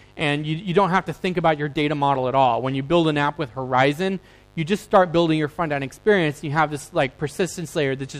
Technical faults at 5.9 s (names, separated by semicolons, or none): mains buzz